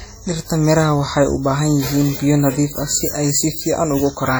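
Speech runs through the whole clip with heavy transform-codec damage, most likely WMA compression from an early WMA encoder at a low bitrate, around 32 kbps. The speech sounds ringing and washy, with a hiss that swells and fades with the signal. What sets it apart from broadband background noise is that this hiss follows the sound and smears over tens of milliseconds rather than sitting at a steady level.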